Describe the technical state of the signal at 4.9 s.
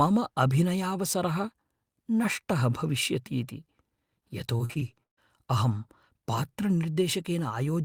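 At 4.9 s you're right in the middle of a burst of repeated packet loss, the robotic kind, running from about 4.57 to 5.19 s. The stream drops out five times in that stretch, and each hole gets papered over by stretching the last bit of sound, about 235 ms of fill in all, roughly 38% of the span, with the longest gap around 136 ms. So the speech turns choppy, with pieces missing.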